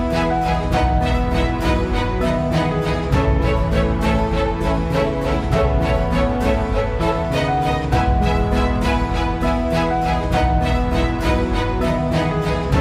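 Nothing here sounds technically wrong; the audio just runs along without a single hiccup worth flagging.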